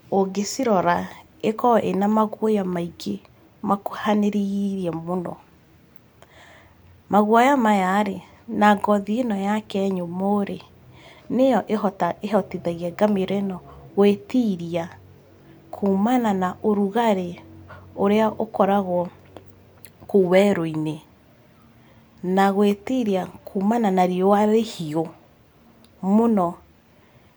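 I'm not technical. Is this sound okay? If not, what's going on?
Yes, this recording sounds fine. Nothing in it stands out as a technical problem at any point.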